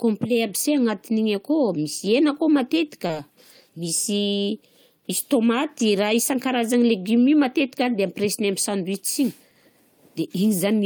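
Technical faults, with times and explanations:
3.07 to 3.11 s, short concealed packet loss: about 20 ms of the speech arrived too late to decode, and the receiver filled roughly 17 ms by extending the preceding sound before blending back. The result is a brief smear, not the hard silence of a plain dropout.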